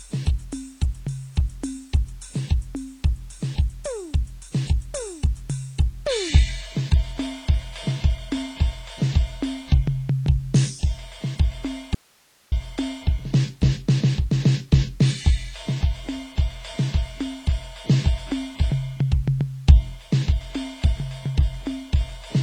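Throughout, the music sounds dull and smeared, with nothing above 10 kHz and a warbling texture, likely from AAC compression at a low bitrate around 24 kbps rather than simple low-pass filtering. From 11.95 to 12.52 s, about 0.57 s, the music cuts out abruptly, leaving only faint hiss far below normal level. This points to an audio dropout to a faint residue, not a pause or fade, with the path likely staying live after the break.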